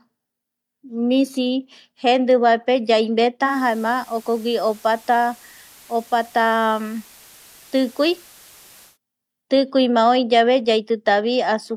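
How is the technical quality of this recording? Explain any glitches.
The recording has one glitch: the speech drops from digital to analogue reception between 3.42 and 8.98 s, a digital radio blending to analogue. The receiver lost the digital stream and cross-faded over about 150 ms to the station's FM broadcast, then faded back. The FM stretch carries steady hiss about 25 dB below the speech and sits about 2 dB lower. Unlike a dropout or noise burst, the sound never breaks, and it returns just as smoothly.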